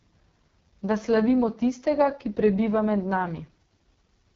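Speech that sounds rough and raspy throughout, with nothing above about 7.2 kHz. This is the AMR wideband (HD Voice) codec pushed hard. The harsh texture fits its lowest 6.6 kbit/s mode, where the vocal-tract model and pulse coding are starved of bits.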